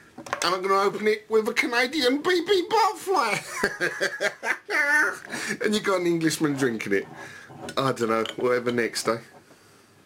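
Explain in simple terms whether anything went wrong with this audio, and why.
Crude rate conversion runs through the whole clip. The audio was converted to a different sample rate by grabbing the nearest sample instead of filtering properly, which leaves a gritty, off-key fizz on loud, bright sounds.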